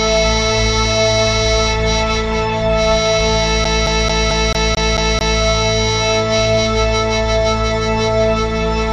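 At 3.64 s the music gets caught in a CD stuck on one turn: a scratch keeps throwing the laser back, so the same 220 ms slice repeats eight times with a tiny mute at each jump, a quick, even stutter until it frees itself at 5.41 s.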